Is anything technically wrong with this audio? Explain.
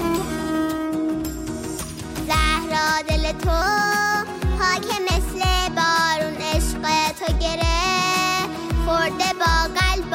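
Yes. From 3.62 to 5.11 s there is a section at the wrong speed. That stretch was likely played back against a mismatched clock, running 1.12 times too fast. Speed and pitch move together, so the sound hurries and rises about two semitones, then snaps back.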